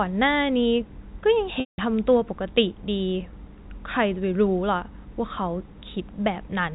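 Packet loss with pitch repetition at 1.60 to 1.78 s: about 180 ms of speech goes missing, which fits nine 20 ms packets. The receiver repeats the last pitch period as a brief buzzy hold, fades it to silence, then cross-fades back into the band-limited G.711 telephone sound.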